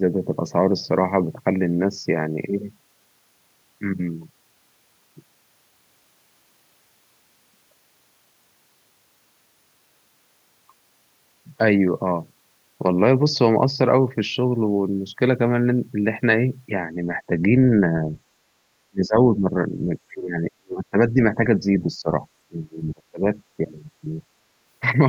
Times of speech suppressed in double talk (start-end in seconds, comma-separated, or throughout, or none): 18.88-19.53, 20.09-21.19, 22.00-22.11, 22.48-23.22